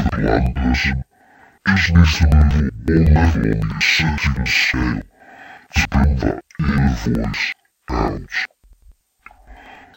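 Interleaved audio read as planar runs from start to end: each block of about 93 ms, which fits a 4096-sample buffer, has its first half taken as left and its second as right. The speech drops an octave, sounds doubled, and chops at 10.8 Hz.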